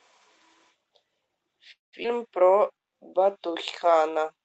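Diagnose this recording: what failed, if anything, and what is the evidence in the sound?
Network stage, likely a call audio freeze: packets stalled and the jitter buffer ran dry. From 1.71 to 1.95 s the last sound is stretched into a fading fill, about 150 ms of it silent. Playback then resumes where it stopped, inserting roughly 0.21 s of delay with nothing lost.

A skip ahead follows at 2.03 to 2.06 s. Around 150 ms of audio was dropped, in transit or by the jitter buffer overflowing, while later audio was already waiting. The sound jumps forward with only a brief 12 ms join, and that stretch is simply gone.

A jitter buffer slow-down runs from 2.45 to 4.03 s. The buffer was rebuilding its reserve by repeating single pitch periods, adding 128 ms in total. Playback runs at 92% speed with unchanged pitch, so sounds are drawn out through the Opus call path's 8 kHz bandwidth.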